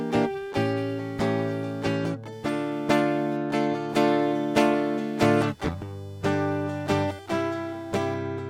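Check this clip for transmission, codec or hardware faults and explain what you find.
One hardware fault runs through the whole music clip: computer activity noise. Processor and peripheral load shifts the audio circuit's shared ground, adding a buzzy chirping around 500 Hz, roughly 35 dB below the music.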